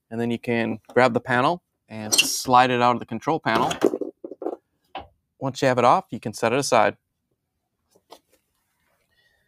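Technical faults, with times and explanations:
Throughout: noise suppressor applied to music or sounds. A suppressor built for speech stays active on this audio. It mistakes steady tones, ambience and reverb for noise. Its gain keeps moving by roughly 5 dB as it decides what to keep. Sharp onsets mostly pass through. Held parts and decaying tails are pulled down. The sound pumps and thins out across the whole clip.
4.17 to 5.17 s and 7.92 to 8.36 s: sound cut by the noise suppressor. In these two spans, the suppressor judges the sound to be noise and clamps down much harder. The first span dips by about 22 dB at its deepest, over less than half a second in total. The second dips by about 17 dB, over roughly a fifth of a second. Sustained and fading material sinks sharply or ends early.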